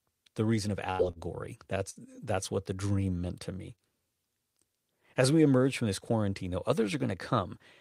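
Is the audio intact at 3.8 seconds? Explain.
No. Between 3.76 and 3.81 s there is a short stall from a late packet. A packet arrived after its playout time, so the jitter buffer ran dry and the receiver bridged the gap by stretching the preceding speech for about 22 ms. It then resumed exactly where it had paused, losing nothing but running 22 ms later from then on. What you hear is one sound held slightly too long, with a faint buzz or dip.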